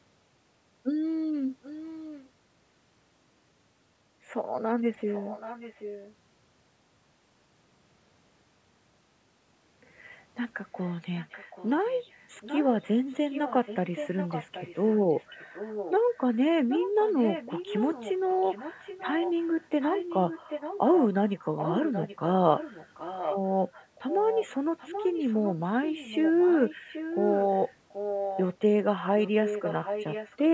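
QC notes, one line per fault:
1.62–2.30, 5.07–6.15, 10.79–16.37, 16.69–22.18, 22.56–23.37, 23.95–28.42, 29.20–30.54 s: echo leak. A second copy of the speech trails the original by a fixed 0.78 s. It starts roughly 15 dB down and grows to only about 5 dB below the speech near the end. The far end's echo canceller has likely failed to remove its loudspeaker sound from the microphone feed. The lag is constant and the copy is distinct rather than a smeared decay, so this is not room reverberation.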